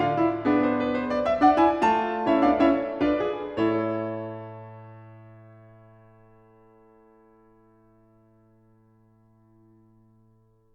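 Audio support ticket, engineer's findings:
Engineer's findings: no audible technical faults in this music clip.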